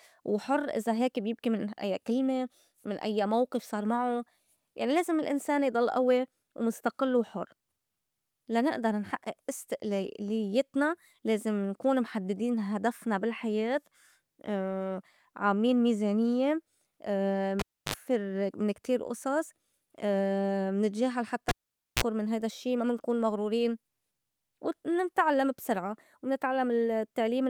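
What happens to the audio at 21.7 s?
At 21.7 s the speech drops out because the cable is pulled and plugged in. The gap runs from 21.49 to 22.04 s, just after "منتجاهل حتّى" and before "من هيدا الشّي ما". A pop marks the disconnection, followed by about 0.5 s of near silence. As the plug goes back in, a 45 ms burst of 60 Hz mains buzz sounds while only the tip makes contact, and a second pop comes as the signal returns.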